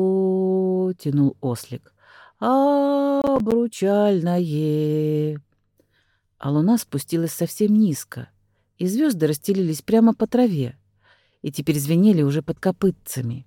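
Between 3.22 and 3.52 s the processor fell behind and repeatedly failed to deliver its audio buffers on time, a case of processor overload crackle. About seven buffers, each around ten milliseconds long, were missed over that stretch, and every miss was filled with silence. The result is a burst of short, hard-edged dropouts peppering the audio for roughly a third of a second, heard as gritty crackle that clears once the load eases.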